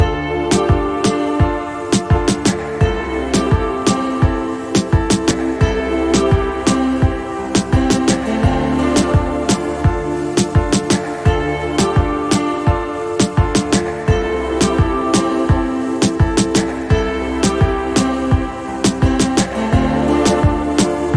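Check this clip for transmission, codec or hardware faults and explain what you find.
Nothing stood out as a fault on listening to the clip.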